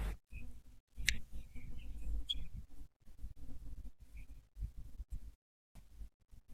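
At 5.69 s there's a clipped start after a pause: the output device dozed off during the 0.35 s gap, so roughly 63 ms of speech vanishes and the next word snaps in abruptly.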